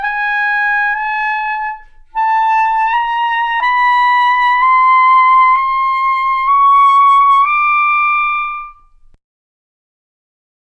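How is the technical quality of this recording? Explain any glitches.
No glitches turn up anywhere in this recording, so there's nothing here that needs explaining.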